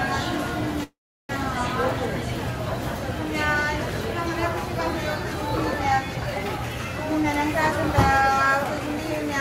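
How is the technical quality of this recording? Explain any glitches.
The recording has one glitch, a call audio freeze. From 0.83 to 1.32 s the sound stalls. It continues briefly as a fading buzz, then about 0.35 s of silence. This is likely packets held up in transit, emptying the jitter buffer. Playback then resumes where it stopped, so nothing is lost. The sound simply arrives about 0.46 s later.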